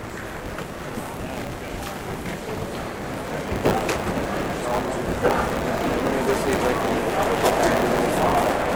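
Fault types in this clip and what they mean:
Buffer tearing: the software filling the ring buffer and the hardware reading it have drifted out of step, so their positions cross inside each period and part of every buffer replays stale data. Here roughly a sixth of each period carries audio from about 30 ms earlier, spliced in with hard edges. The result is a steady robotic buzz at 100 Hz across the whole clip, riding on the sound wherever signal is present, consistent with a 10 ms buffer period.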